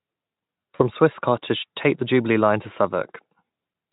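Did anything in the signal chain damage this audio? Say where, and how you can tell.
Yes, network: from 0.75 to 0.82 s the speech smears into a fading buzz or noise, VoIP packet loss concealed by the speech codec, which fits two lost 20 ms frames.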